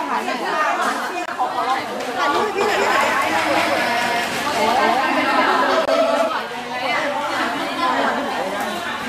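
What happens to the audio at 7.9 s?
Nothing goes wrong at 7.9 s; the audio plays through that moment intact.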